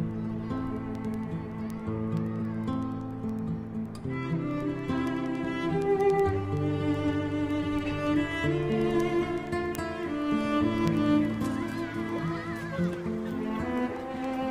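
Word clock ticks run from 0.11 to 14.43 s, roughly ten per second. An unlocked digital receiver, off by around 200 ppm, drops or repeats samples.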